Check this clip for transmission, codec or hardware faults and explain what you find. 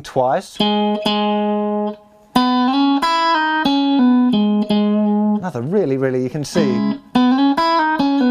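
No transmission or hardware faults found.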